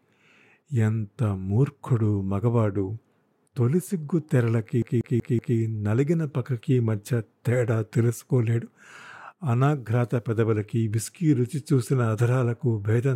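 A CD stuck on one turn runs from 4.82 to 5.58 s. A flaw on the disc keeps knocking the laser back one track at the same point on each rotation, so a single 0.19 s slice of the speech plays four times in a row, with a brief mute at every jump. The result is a rapid, perfectly even stutter, the mechanical judder of a skipping CD, before the audio moves on.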